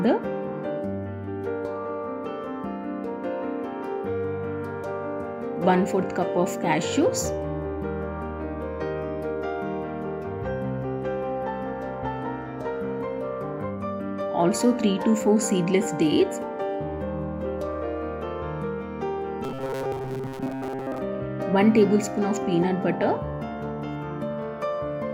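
From 19.44 to 20.98 s the audio turns into a rigid 133 Hz metallic buzz, robotic sound from repeated short buffers, likely a 7.5 ms chunk looping during starved input.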